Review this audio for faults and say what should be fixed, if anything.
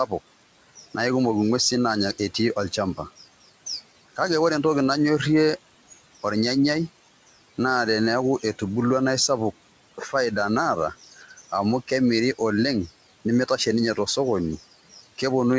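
Speech cut by the noise suppressor occurs twice. Right after "naa eisapuk", from 9.98 to 10.14 s, the sound dips by about 11 dB for roughly a tenth of a second. From 11.04 to 11.53 s, just before "amu kemiri oleng nemeitashe", it drops by about 11 dB again, over roughly a third of a second. The suppressor mistook soft speech for background noise. It turned those parts down with the room noise, so they sound swallowed and faint. To prevent this, lower the suppressor's aggressiveness or raise its speech-detection sensitivity so quiet speech passes through.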